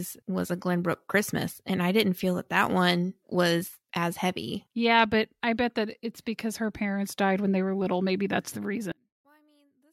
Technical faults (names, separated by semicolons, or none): one channel inverted